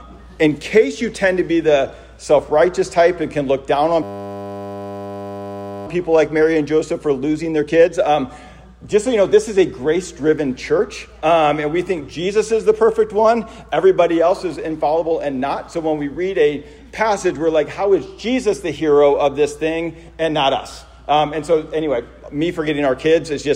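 From 4.03 to 5.87 s a system hang loop takes over: the system froze while the hardware kept replaying one 10 ms buffer, producing a steady 100 Hz buzz. A waveform shows an identical repeating cycle; a spectrogram shows flat harmonics at 100 Hz multiples. Essentially no audio is lost.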